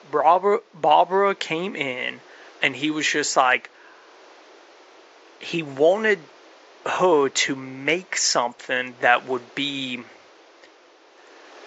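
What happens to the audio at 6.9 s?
At 6.9 s the speech carries the same degradation heard across the entire clip: a dull, band-limited tone with a gurgling, granular texture, most likely from MP2 compression. MPEG Layer II divides the signal into 32 sub-bands and allocates bits to each; when bits run short, upper bands drop out and flicker while the remaining ones are coarsely quantised. The plainly audible damage points to a low bitrate, around 80 kbps. Room noise sits about 29 dB below the speech.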